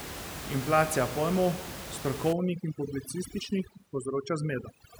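From 2.33 s to the end, overdone noise removal takes hold: the room noise, about 10 dB below the speech, is pulled down band by band into near silence with twinkling specks, and the quieter speech components are cut along with it.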